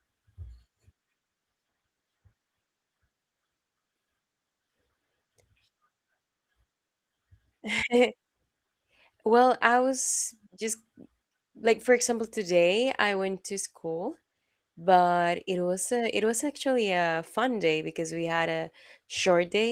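There are no technical faults to describe in time order in this speech recording.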